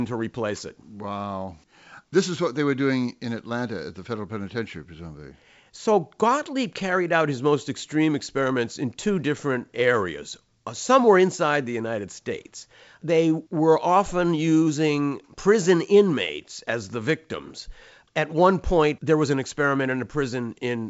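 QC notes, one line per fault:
No faults heard anywhere in this speech clip.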